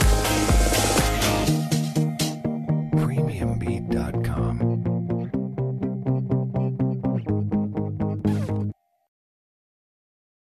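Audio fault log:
No technical faults detected.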